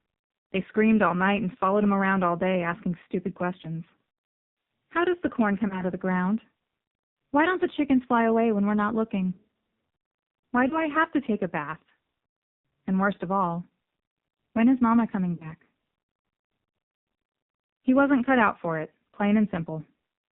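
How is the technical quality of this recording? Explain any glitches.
The recording is heavily degraded throughout, with three short dropouts.

Throughout, the speech sounds buzzy, synthetic and muffled, with nothing above 4 kHz. This is heavy AMR narrowband mobile codec damage, pointing to a very low rate, around 5.9 kbps.

At 5.68 to 5.82 s, 10.68 to 10.82 s and 15.36 to 15.53 s, the voice briefly dips and warbles. These are lost AMR speech frames: the decoder repeats its last pitch and vocal tract settings with falling gain. The first two fit a single lost 20 ms frame, and the longer third fits about 40 ms lost.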